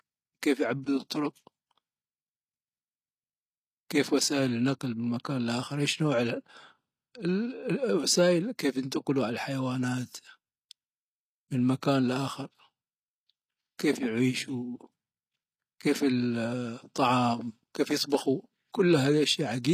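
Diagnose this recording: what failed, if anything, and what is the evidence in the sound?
The failure is in the codec stage. Across the whole speech recording the top end sounds bright but synthetic. The s sounds come out gritty and lispy, and nothing is left above about 14.9 kHz. That points to a likely cause of HE-AAC compression at a low rate, something like 24 kbps. The treble isn't coded directly. It's patched together by copying lower bands upward under a coarse envelope, so the harmonics above the crossover don't line up with the real ones.

There's also a pre-echo at 18.10 to 18.12 s. Just before a sharp attack you get a brief hiss spread over about 22 ms, and the attack itself sounds softened and smeared. This is also codec damage. The transform spreads its quantisation noise evenly across the block, and because the attack lands late in that block, noise sized for the loud part leaks into the quiet moment before it.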